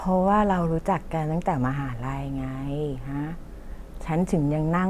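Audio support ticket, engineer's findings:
Listened to the speech recording in full; nothing stood out to report.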